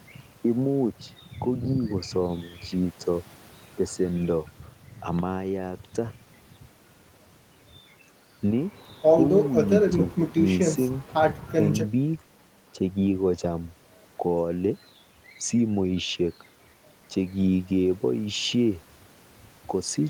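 No technical faults are audible.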